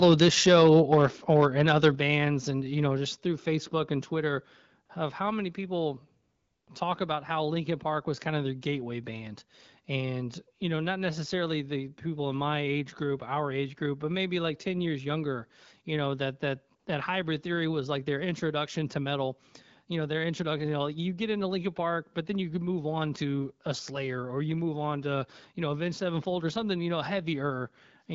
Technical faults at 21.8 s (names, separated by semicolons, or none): none